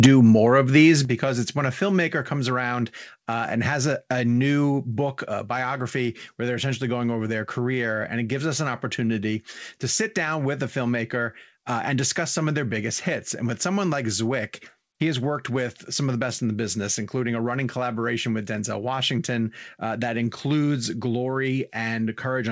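At 0.04 to 0.06 s, just before "more of these", the peaks flatten against the converter's limit in what is most likely microphone overload: the input drives about 4 dB past the converter's limit and roughly a fifth of the samples in that stretch are clipped. It sounds like a harsh, crackly edge on the onset. On a waveform the tops appear squared off and flat, and a spectrogram shows a brief vertical smear of broadband energy up to the 8 kHz ceiling of the G.722 call path.

Immediately after, at 0.06 s, the whole level drops by about 4 dB in a single step. This is likely the microphone volume stepped down by the call software reacting to that clipping. A second step of about 6 dB follows at 1.05 s, between "more of these" and "it's when a". Each sounds like the talker and room suddenly moving farther off. The waveform envelope shows a clean stair-step down, and the spectrogram darkens evenly across all frequencies at both points.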